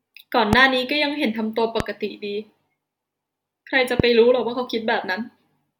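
A loud pop lands at 0.53 to 0.55 s, another at 1.80 to 1.83 s, and a third at 4.00 to 4.02 s, each a single sharp thump standing roughly 15 dB above the speech for the first two and around 20 dB for the last. Each is a brief voltage pulse added to the signal, likely from a switch, plug contact or static discharge, shaped into a short click by the downstream circuitry while the speech continues underneath.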